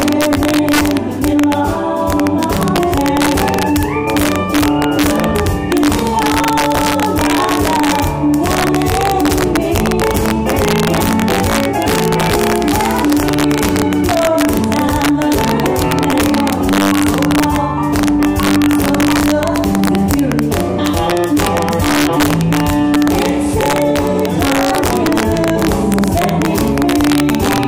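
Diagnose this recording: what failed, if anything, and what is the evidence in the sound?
What failed is integer overflow, somewhere in the fixed-point gain or sample-format conversion stage. Across the whole recording the loudest peaks don't flatten the way clipping would. They snap into harsh, violent cracks. The signal's being pushed about 3 dB past full scale with no limiting, so every sample over the ceiling wraps to the opposite sign and jumps across the full range. Only a small fraction of samples, under one percent, cross over, which is why it's intermittent cracking rather than constant grit.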